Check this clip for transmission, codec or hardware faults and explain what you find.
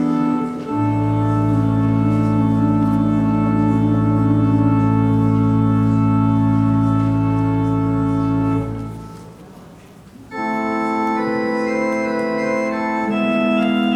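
Nothing in the clip points to a transmission, codec or hardware fault.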